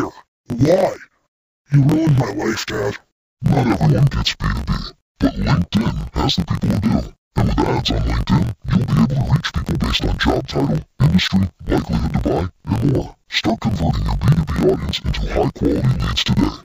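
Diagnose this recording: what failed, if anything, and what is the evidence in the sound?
Interleaved audio read as planar, at the sample-format conversion stage, throughout the speech. It is an octave low, doubled and choppy, with a 45.9 Hz buzz from 21.77 ms blocks.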